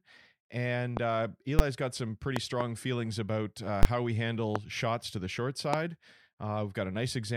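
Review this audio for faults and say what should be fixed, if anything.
Loud pops occur at 0.97–0.99 s, 2.36–2.63 s (two pops in quick succession), 4.56–4.58 s and 5.73–5.76 s. Each is a sharp thump about 20 dB above the speech, which continues underneath. These are likely voltage pulses from a plug, switch, static discharge or driver glitch, shaped by the following circuitry. On a waveform they appear as isolated spikes towering over the speech envelope, sometimes with a brief decaying ring. On a spectrogram they show as thin vertical broadband stripes. To prevent them, secure connectors, ground and shield the signal chain, and keep switching and static away from live inputs.

Invalid numbers at full scale appear at 1.59 s as a single bang over a 10 ms block, and at 3.83–3.85 s as a bang over a 20 ms block. A calculation produced infinite or invalid values, which were clamped to the extreme sample value for the whole block. 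A waveform shows a flat slab at one extreme value, far beyond the speech peaks. A spectrogram shows bright broadband lines at the block edges. To prevent this, check processing outputs for invalid values and replace them with silence or the last good sample before conversion.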